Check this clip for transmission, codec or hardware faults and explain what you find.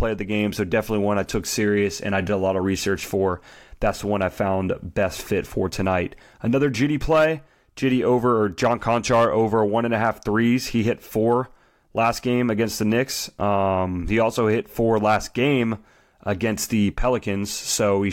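The speech signal comes through intact and continuous, with no faults to report at any point.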